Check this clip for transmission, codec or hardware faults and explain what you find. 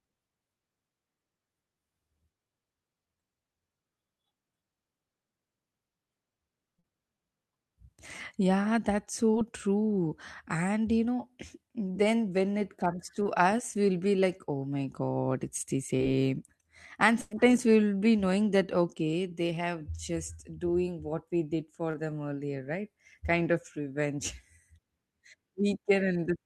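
The clip is speech, and it carries two kinds of transmission fault: five short concealed packet losses and one burst of packet loss.

Short concealed packet loss occurs at 6.79 to 6.85 s, 9.31 to 9.35 s, 13.23 to 13.27 s, 15.97 to 16.01 s (after "it's the") and 21.91 to 21.95 s (between "doing what we did" and "them earlier right"). Each time, 20 to 40 ms of audio failed to arrive, and the receiver patched it by extending the preceding sound. This is heard as a brief smear or wobble, not an audible gap.

The burst of packet loss runs from 17.21 to 17.33 s, just before "we'll be knowing that". About 100 ms went missing in a row. The concealment stretched the last sound and faded it over the hole, which produces a held buzz or dying hiss before speech resumes, with that stretch absent. Its length and fading tail distinguish it from the brief smears.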